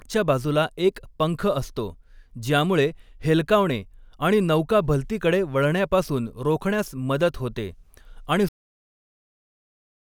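At 8.49 s, just after "रोखण्यास मदत होते आणि", the speech hits a cut-off end: the final buffers never reached the output, so the sound stops mid-phrase and drops straight to digital silence. Unlike a fade-out or natural ending, there is no decay.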